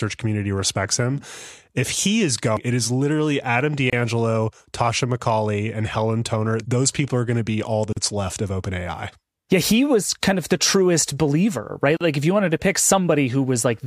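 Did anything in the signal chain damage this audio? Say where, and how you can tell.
Yes. At the codec stage, gaps at joins of encoded pieces cut the speech at 3.90 s (about 27 ms), 7.93 s (40 ms, between "going to be all" and "left of") and 11.97 s (40 ms, after "the truest believer right"). They fall every 4.0 s, where separately encoded segments were joined with their start delay and end padding left in. The sound resumes where it stopped, so nothing was lost, unlike a dropout.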